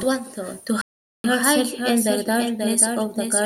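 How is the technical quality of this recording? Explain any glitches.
The recording has two technical problems, both affecting the speech.

Throughout, a doubled audio track: a second full-band copy trails about half a second behind, about 5 dB quieter, with no decay, likely from a slower duplicate capture path.

From 0.81 to 1.24 s there is a playback stall. The speech cuts to silence for 0.43 s, likely because the player ran out of data, then resumes.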